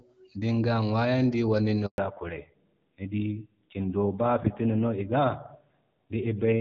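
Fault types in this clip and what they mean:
handover gap: The call was passed from one network to another, and no speech frames got through during the switch. At 1.86 s the speech fades out within a few tens of milliseconds. Silence then lasts 120 ms, until the new link takes over at 1.98 s. Whatever was said in that span is lost. The speech resumes once the new connection starts carrying audio.
fallback to narrowband: From 1.98 s to the end, the call drops out of HD Voice. Before the switch, the wideband sound is clear, with only light coding damage, which fits AMR-WB at 12.65 kbit/s. After it, nothing remains above 4 kHz. The speech loses its crisp top end and sounds duller and more muffled. It also turns rougher, which fits a lower-rate narrowband codec such as AMR-NB at 7.4 kbit/s.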